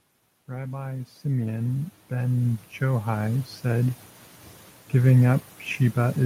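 Automatic gain rising runs from 0.32 s to 4.04 s. The automatic gain control judged the incoming speech too quiet and pushed its gain up steadily, by about 15 dB over nearly four seconds. Because the boost is applied to the whole signal, the speech and the background noise beneath it swell together, so the room seems to creep closer and louder as the talker's level climbs, with no sudden step at any point.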